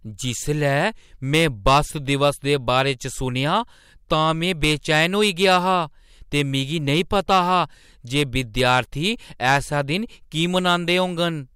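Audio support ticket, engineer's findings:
Crackle on speech peaks, whole clip. Hard clipping: level driven about 6 dB past what a gain stage or converter can pass, so a small fraction of samples, well under one percent, are cut flat, adding high harmonics on loud syllables.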